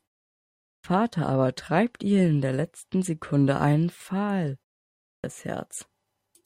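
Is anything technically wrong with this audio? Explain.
Yes, there is a clipped start after a pause, twice: about 320 ms is lost from 0.52 to 0.84 s after a 0.52 s silence, and again from 4.92 to 5.24 s after a 0.36 s pause. The output device sleeps during the silence and needs that time to wake, so speech resumes abruptly, missing its opening sounds. On a waveform, there is a hard-edged jump from flat silence into speech with no rising onset. On a spectrogram, the energy begins mid-syllable with a sharp vertical edge.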